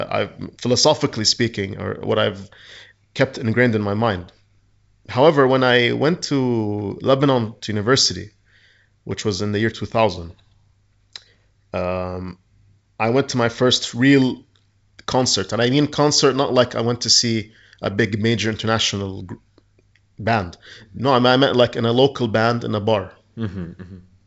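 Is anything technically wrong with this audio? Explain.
No, nothing technically wrong can be heard here.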